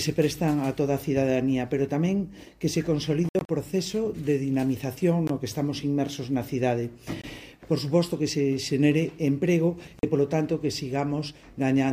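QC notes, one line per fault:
3.29–3.49 s, Bluetooth dropout: several abrupt silent gaps totalling 122 ms over 203 ms, longest 61 ms; sound resumes further on, likely from packets lost on the wireless link.
5.27 s, 7.22 s, 9.99 s, Bluetooth dropout: hard-edged holes of 20, 20 and 41 ms, fitting single or paired 20 ms packets; playback resumes as if uninterrupted, likely link packet loss.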